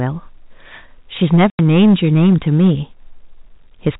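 Hard clipping runs from 1.23 to 2.72 s: the speech is driven about 12 dB past what the chain can pass, so peaks are sliced flat and every loud syllable turns to harsh fuzz. Packet loss filled with silence follows at 1.50 to 1.59 s, a 90 ms hole with hard edges that fits three lost 30 ms packets, cut into the clipped stretch. The G.711 telephone band stays audible throughout, capped at 4 kHz.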